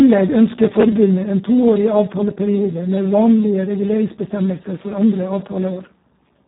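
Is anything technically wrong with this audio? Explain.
Yes. Throughout the speech, the Speex codec is starved of bits, which fits a rate of about 4 kbps, so its excitation is crudely coded and the voice comes out hoarse, noisy and robotic, with nothing present above 3.9 kHz, leaving it muffled and band-limited.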